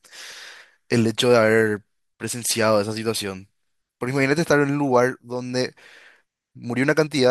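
Nothing in the signal points to a technical problem at any point in the recording.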